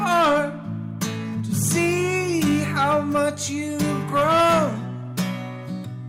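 No technical faults can be heard anywhere in this audio; the signal stays steady and intact throughout.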